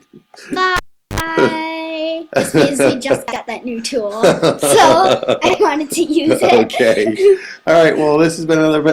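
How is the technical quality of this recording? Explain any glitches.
The recording has clear technical faults: a cable dropout near the start, two short jumbled moments in the middle, and a skip near the end.

From 0.76 to 1.20 s the cable is pulled and plugged in. A live connector comes out and goes back in. There is a pop, then about 388 ms of near silence. Next comes roughly 67 ms of 50 Hz mains buzz while only the tip makes contact, and a second pop as the sound returns. On a waveform this shows as two sharp spikes around a flat gap. A spectrogram shows full-height vertical lines at the pops and a 50 Hz line with harmonics stacked above it during the buzz.

From 3.28 to 3.36 s and again from 5.46 to 5.54 s, the chunks are out of order. In each case a 40 ms block plays one chunk late, swapped with the block that should follow it. No audio is lost, but the hard joins produce a garbled stutter. 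A spectrogram shows abrupt vertical seams where the spectral content jumps discontinuously. The waveform shows sudden steps in shape at those joins.

At 7.45 s, audio is missing between chunks. Around 20 ms disappears and the two sides are butted together, producing a small skip. This is likely caused by a gap at a chunk boundary, which fits a recorder handling audio in 4-second chunks. On a waveform it appears as a single discontinuity with no silent stretch. A spectrogram shows a thin broadband line where the signal jumps.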